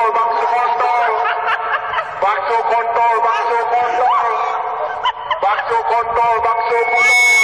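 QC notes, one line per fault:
0.43–0.45 s, damaged data in a compressed stream: corrupted frames leave the decoder briefly out of sync, a 20 ms disturbance that shows as a narrow broadband vertical stripe or gap.
6.42 s to end, loudspeaker feedback squeal: the mic-speaker loop exceeds unity gain at 2.2 kHz, so a tone swells over roughly 0.7 s to about 5 dB above the signal, a bright horizontal line on the spectrogram.
6.96 s, damaged data in a compressed stream: another sync loss, under 20 ms, seen as a thin vertical break in the waveform and spectrogram cutting across the feedback tone.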